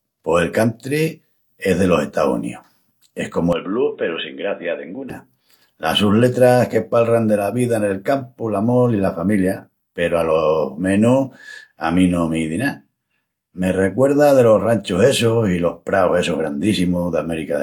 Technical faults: input switched to a poorer device

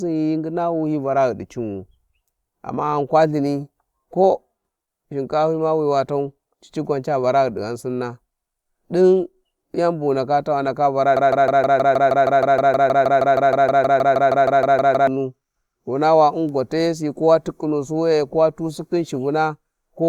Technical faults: broken-record loop

